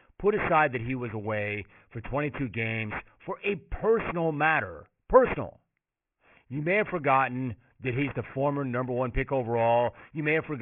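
Aliasing runs through the whole of this speech clip: the audio was taken down to what sounds like a 6 kHz rate from a 48 kHz original without an anti-aliasing filter, so everything above 3 kHz folds back below it as unrelated tones, fairly strong, leaving sibilants gritty and metallic and the spectrum packed hard against 3 kHz.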